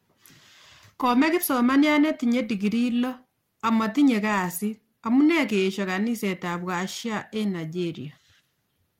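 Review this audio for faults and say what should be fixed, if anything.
Periodic clock jitter runs throughout. The converter clock wobbles at around 1 kHz, adding sidebands that give the speech a rough, metallic edge. Fix it with a clean, well-isolated clock source.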